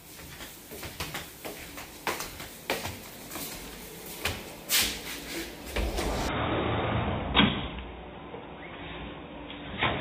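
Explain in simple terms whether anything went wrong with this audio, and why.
Two things went wrong. At 1.0 s there is a brief garbled blip: damaged data in a compressed stream. Part of the stored file was corrupted, so the decoder misread that spot.

From 6.28 s to the end, the sound suddenly turns dull and boxy, with nothing above about 3.8 kHz. It also gets a little quieter and picks up a faint new background noise. The likely cause is an input switched to a poorer device. It happens instantly, with no silence at the switch. Unlike gradual muffling, the change arrives all at once and brings a different noise.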